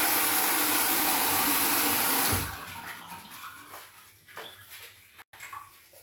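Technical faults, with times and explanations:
0.83–1.46 s: processor overload crackle. A burst of gritty crackle rides on the sound for about 0.6 s. The processor is falling behind on tiny buffers, which fits buffers of around 5 ms, and roughly twenty of them are skipped outright, each leaving a hard-edged dropout.
5.22–5.33 s: gap at a join of encoded pieces. A 112 ms gap cuts into continuous sound, its edges smeared by the codec, before the sound resumes where it stopped. Two separately encoded pieces were joined untrimmed, so encoder start delay and end-frame padding remain.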